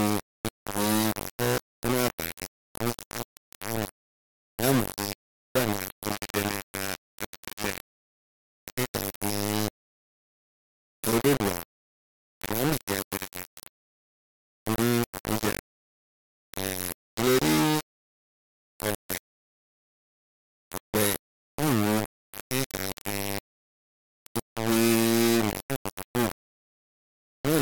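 Low bit depth without dither runs through the whole speech clip, most likely from rounding the signal to about 3 bits. The error tracks the signal, so the voice sounds harshly grainy, with quantisation noise roughly as loud as the speech itself, and quiet passages crumble or sputter.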